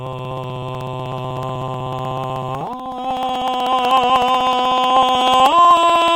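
From 0.07 s to 6.08 s the music ticks every 0.062 s, a periodic USB or driver dropout. Each time, a sliver of roughly 2 ms is skipped, not silenced, as something blocks the bus at a fixed rate. The strict regularity separates it from random clicks.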